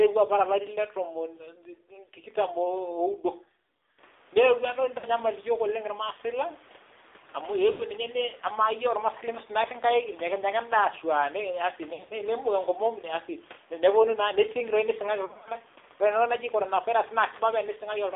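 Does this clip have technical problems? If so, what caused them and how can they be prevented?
Yes. Throughout, the speech is thin and boxed in, confined to roughly 300 Hz to 3.6 kHz, with a buzzy, synthetic edge. This is the AMR narrowband mobile codec. It rebuilds speech from a vocal-tract model excited by a few pulses per frame, and the plainly audible damage points to one of its lower modes, around 7.4 kbps. To prevent it, use a wideband codec such as AMR-WB or a higher AMR mode where the network allows.

Short stretches of the speech warble, stretch, and sag before recovering roughly: from 4.98 to 5.06 s (about 60 ms lost), from 7.72 to 7.83 s (about 80 ms), from 11.94 to 12.13 s, and from 15.26 to 15.50 s. The last two are scattered losses with short runs. These are lost AMR speech frames. Radio errors corrupted them, so the decoder replayed the last good pitch and vocal-tract settings at falling gain. 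The dropouts are consistent with three to seven 20 ms frames going missing. Better radio coverage or stronger channel coding prevents this. The room noise that rises around 4 s sits well below the speech.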